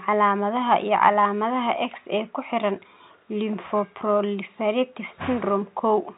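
No faults are present; the speech is carried through G.711 telephone coding, so nothing above about 3.9 kHz comes through.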